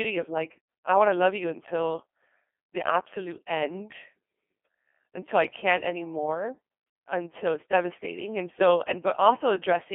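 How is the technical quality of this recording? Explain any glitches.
Technical quality is poor throughout. From start to finish the speech sounds robotic and buzzy, with a synthetic, sine-like timbre and heavy codec damage. It is also squeezed into a narrow band from 250 Hz to 3.4 kHz, so it has no real low end and no air. This is the Codec 2 vocoder, and the sound points to a very low rate, around 2.4 kbit/s. Instead of sending the waveform, the encoder transmits only pitch, voicing, energy and a coarse spectral envelope, and the decoder rebuilds the voice from sine waves. Natural texture is lost, leaving the mechanical, buzzy quality heard across the whole recording.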